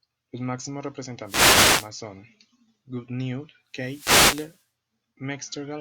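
Wireless microphone noise hits at 1.24–1.91 s and 3.73–4.64 s break into this speech as static swishes, where the FM radio signal fades and receiver noise rises.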